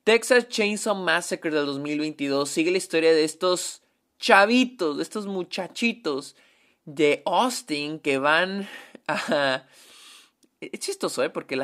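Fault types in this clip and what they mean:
No technical fault can be heard anywhere in this speech recording. There is nothing to list for it here.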